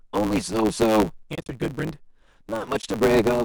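A speech clip with a steady buzz at about 109 Hz throughout, from a block size mismatch (truncated). One stage writes longer blocks than the next reads, which fits 512-sample blocks, so each block's tail is discarded. The speech runs 1.16 times fast at roughly its normal pitch, which sets it apart from a plain speed-up or resampling error, where pitch would rise too. AAC frame loss with muting leaves soft-edged holes between 1.35 and 1.49 s, where about 110 ms of sound is lost in gaps spread over 160 ms, the longest around 40 ms, and again at 2.81–2.84 s for 20 ms. The sound fades out and back in, unlike a hard dropout. Slight graininess underneath is likely from low-delay AAC compression.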